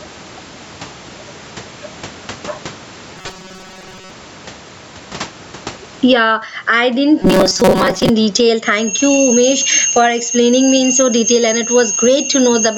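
Gain pumping runs through the whole speech clip: the level drops by something like 20 dB the moment a loud syllable arrives. The likely cause is input gain set far too high, with a fast limiter clamping each peak. The speech itself sounds flattened and squashed.

From 3.18 to 4.11 s, and again from 7.22 to 8.10 s, the sound turns into a rigid metallic drone with a fixed pitch of 188 Hz. This is robotic sound from repeated short buffers, likely caused by audio arriving too rarely, so the same slice of about 5.3 ms is played over and over. In the first stretch most of the audio is replaced, and in the second about half. Unlike codec warble, the buzz keeps one steady pitch while still following the rough shape of the speech.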